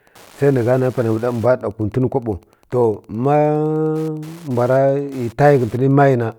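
From start to finish, a faint tick runs under the speech, about ten times a second. This is Wi-Fi interference. A nearby Wi-Fi radio's beacon, sent every 102.4 ms, is being rectified by the audio circuit. The ticking sits well below the speech.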